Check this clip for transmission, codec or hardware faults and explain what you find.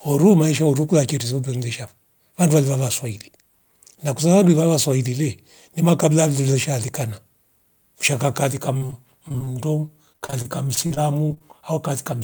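Two stretches of repeated packet loss (robotic sound) break up the speech, from 8.77 to 9.53 s, just after "mshanga kaalika", and from 10.12 to 11.42 s. Both sound choppy, with pieces missing. Short holes, up to 37 and 45 ms, recur rapidly, each patched by stretching the preceding sound, so about a fifth of each stretch is synthetic fill.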